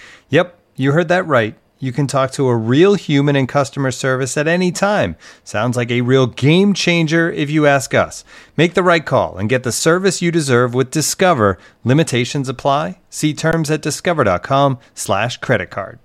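At 13.52 s the speech briefly freezes in an underrun with held sample: the output buffer ran dry, so the converter held its last value for 16 ms. Roughly that much live audio went missing.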